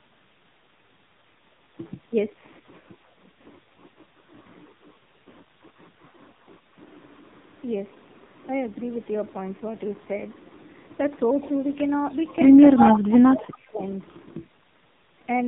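The whole clip runs through the AMR narrowband mobile codec, and it's heavily damaged: nothing above 4 kHz, with a buzzy, synthetic quality that fits a low mode around 5.9 kbps. At 11.42 to 11.5 s there's a faint trace of an echo leak, a copy of the far side arriving about 300 ms late at a very low level, likely a loudspeaker echo the canceller missed. At 12.77 to 12.94 s the same 301 ms echo comes back much louder, nearly as strong as the speech itself. From 12.78 to 13.82 s, with that echo overlapping its start, the talker dips by up to about 30 dB for roughly a second. That's speech suppressed in double talk, likely with the canceller turning the real voice down along with the echo.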